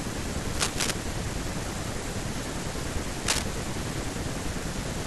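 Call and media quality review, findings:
Cable scratch noise, 0.55–0.91 s and 3.27–3.47 s: scratchy rustling bursts over speech, roughly at speech level, then somewhat louder. Likely a worn cable or connector flexing, contact resistance fluctuating. Spectrogram shows broadband ragged vertical streaks; the waveform shows dense, uneven spiky clusters.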